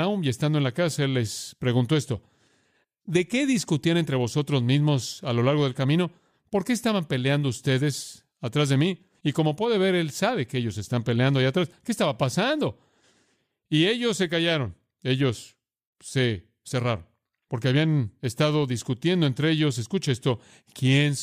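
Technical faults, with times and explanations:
No technical faults detected in this speech recording.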